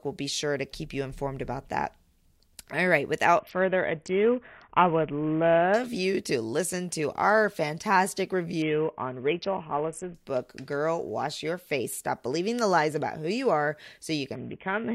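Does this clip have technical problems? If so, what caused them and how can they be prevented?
Yes. There are three Bluetooth SBC bit pool drops, at 3.39 to 5.74 s, 8.62 to 10.14 s and 14.35 s to the end. The speech turns dull and gritty because the congested link starves and coarsens the upper sub-bands, which fits a bit pool falling from 31 to 5. Keeping the phone close to the receiver and away from 2.4 GHz congestion would prevent it.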